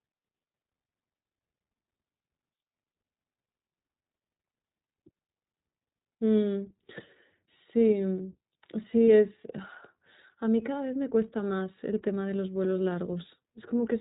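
The whole clip is speech passed through the iLBC codec. Nothing above 4 kHz survives, so the sound is narrowband and boxy. Each frame's excitation is coded on its own, and the damage is plainly audible. Voices come across as clear but rough, with a faintly synthetic edge. The short frame rhythm fits iLBC's 15.2 kbps mode with 20 ms frames.

Lost iLBC frames break in three times. The first runs from 2.76 to 2.78 s, the second from 4.50 to 4.54 s, and the third from 9.07 to 9.09 s. In each gap the decoder repeats the last pitch cycle, blended with noise. The result is a brief held, slightly buzzy vowel. The first and third gaps are 20 ms, which fits one lost frame. The middle gap is 40 ms and sounds longer, which points to two frames. Because iLBC frames stand alone, the sound recovers almost at once afterwards.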